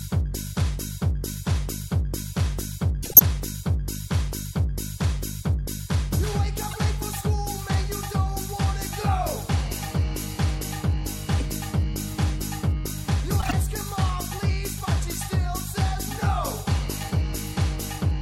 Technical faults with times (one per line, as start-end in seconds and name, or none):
3.02-3.20 compressed frames skipped
6.71-6.76 corrupt frame decoded
11.39-11.42 corrupt frame decoded
13.39-13.53 corrupt frame decoded